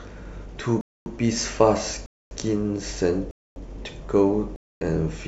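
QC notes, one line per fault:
0.81–1.06 s, 2.06–2.31 s, 3.31–3.56 s, 4.56–4.81 s: gap between chunks. The speech stops dead for 250 ms four times, once after each 1.0 s stretch of audio, so the holes recur every 1.25 s. Each hole has abrupt edges at both ends, and the speech resumes where it left off with nothing missing. That points to chunked delivery or storage in which each join gains silent padding or a delayed start, interrupting the sound at every boundary.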